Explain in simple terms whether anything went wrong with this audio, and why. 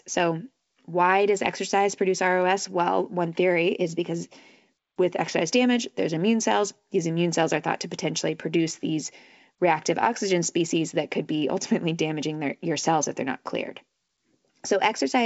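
Nothing went wrong here.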